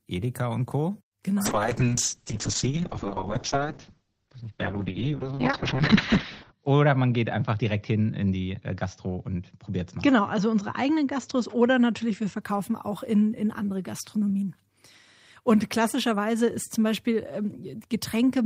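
From 1.46 s to 12.47 s, ending just before "auch in in andere", a call bitrate drop makes the encoder code speech coarsely and cut the top of the band to 6 kHz. The speech turns muffled and rough, consistent with roughly 7 kbps, lowest for about 5 s.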